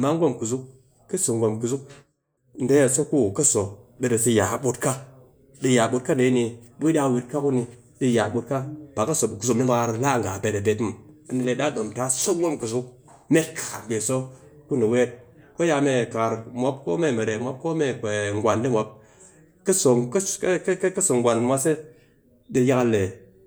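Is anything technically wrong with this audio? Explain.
No, the speech signal comes through intact, with no technical faults to be heard anywhere in the recording.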